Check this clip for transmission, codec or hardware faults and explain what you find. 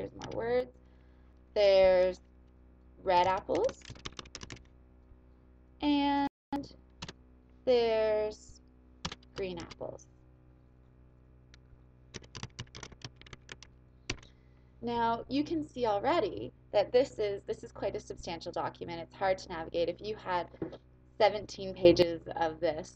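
Two sudden gain jumps. From 0.60 to 0.74 s the sound and its background noise drop together by about 6 dB, and from 21.85 to 22.02 s both leap up by about 13 dB. The likely cause is digital gain applied between adjacent samples without a ramp.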